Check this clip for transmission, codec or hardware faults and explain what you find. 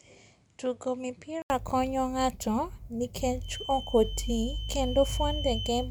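Two faults are present in this speech clip.

Input switched to a poorer device, 0.0 to 1.5 s: likely a change to another microphone. The sound is dull and cut off above 10.5 kHz, about 5 dB quieter, with faint added noise and an 80 ms gap at the switch.

Feedback whistle, 3.40 s to the end: the loudspeaker-to-microphone loop is likely sitting at the edge of feedback, so a thin 3.1 kHz tone that slowly swells and fades runs beneath the speech, well below it.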